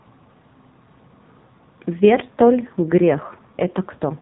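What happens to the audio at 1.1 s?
Nothing goes wrong at 1.1 s; the speech carries on intact through that moment with no dropout, click or sudden distortion.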